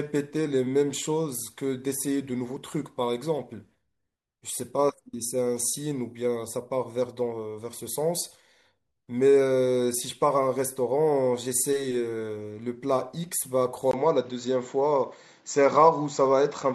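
At 13.91 s the recording likely switched its input to a poorer device, a classic input switched to a poorer device fault, and it stays there until the end at 16.74 s. A silence of about 20 ms marks the switch. The speech then loses everything above 7.6 kHz, turning duller and boxier, and a new background noise appears roughly 35 dB below the voice. The loudness stays about the same across the change.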